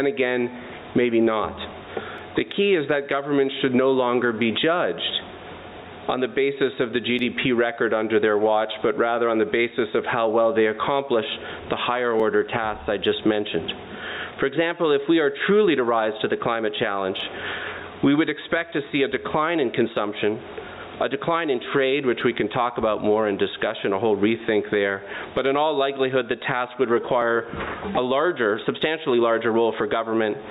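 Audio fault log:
Throughout, gain pumping: the level keeps swelling and ducking by around 15 dB. This is likely gain set far too high for the microphone, with a fast limiter or compressor pulling it down on every loud moment, which squashes the sound. On the waveform the envelope looks flattened, with the floor lifting in pauses. On the spectrogram the background band brightens and darkens in step.
2.18, 7.19, 12.20, 17.20, 22.21 and 27.22 s, overlapping chunks: at each of these joins, spaced 5.0 s apart, 7.07 ms of audio plays twice, heard as a click or stutter. The audio was processed or sent in 5-second chunks, and each chunk began slightly before the previous one ended, so a sliver repeats at every seam. On a waveform each join shows a short duplicated segment with an abrupt discontinuity. On the spectrogram each appears as a thin vertical broadband line at the same regular spacing.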